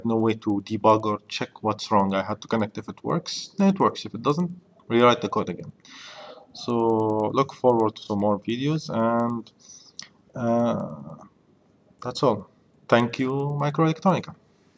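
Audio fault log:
Throughout, resampler restarted on every block: a steady tick runs under the sound at 10 per second, one at each 100 ms block edge, as the conversion from 48 kHz down to 16 kHz was done block by block with no memory of neighbouring samples. The filter's edges saw silence or wrapped-around audio, leaving a small error at every seam. Unlike dropouts or buffer underruns, nothing goes missing, and the ticks follow the signal, vanishing wherever it falls silent.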